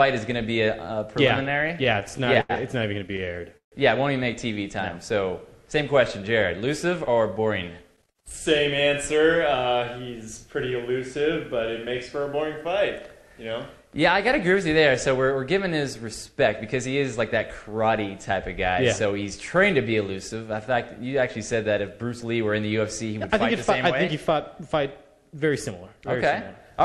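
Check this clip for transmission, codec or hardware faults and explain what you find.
There are two faults here: a stretch of repeated stalls early on, and three spots where the jitter buffer speeds things up.

Repeated stalls (stutter), 1.27 to 3.74 s: packets kept showing up late, so the jitter buffer ran dry 20 times. Each time the receiver stretched out the last bit of sound, fading it across the longer gaps (the longest was 150 ms), until the stream caught up. That filler adds up to 414 ms, about 17% of the stretch. Nothing's actually lost, but the audio drags and stutters.

Jitter buffer speed-up, 6.67 to 10.57 s, 17.89 to 19.13 s and 24.13 to 26.81 s: the buffer was holding more than it wanted, so the receiver kept snipping out short pitch-period chunks to cut the delay. That's roughly a fifth of a second gone in the first stretch and around 70 ms in each of the others. Playback runs at 104%, 104% and 103% with the pitch unchanged, just under the roughly 105% point where it starts to sound hurried.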